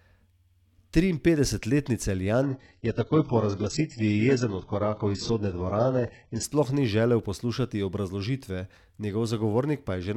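From 2.43 s to 6.43 s the adaptive stream drops to a lower bitrate, with no gap. The connection slowed, so a far cheaper encoding played. It sounds like HE-AAC near 8 kbit/s. Nothing survives above 8 kHz. The drop begins just before "sploh ni želel poslušati".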